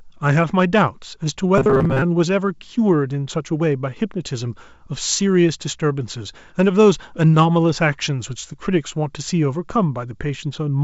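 Clock drift between sender and receiver runs through the whole speech clip. The sending end's clock runs about 1.5% slow, so the receiver's jitter buffer keeps draining and the receiver has to compensate continually. Unlike a single dropout or one burst of network loss, the disturbance never settles. It shows up as a persistent, uneven unsteadiness in timing. The G.722 call path, with nothing above 8 kHz, carries this drift intact.

From 1.18 s to 6.24 s, repeated timing corrections stretch the speech to 98% speed, padding in roughly a tenth of a second overall. Every edit leans the same way, lengthening rather than trimming, and the edits come at irregular spacing. The result is small hiccups and a faintly dragging tempo. A steady slowdown would sound smooth. These corrections are scattered, slightly jerky splices.

From 1.58 s to 2.03 s, the sound collapses into robotic sound from repeated short buffers: a rigid, metallic buzz at 134 Hz that roughly tracks the speech. 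About half of this stretch is filled by repeating a short slice, which fits a buffer of roughly 7.5 ms. The likely cause is audio arriving too seldom while the drained buffer is padded. Ordinary codec distortion would not impose a fixed pitch like this.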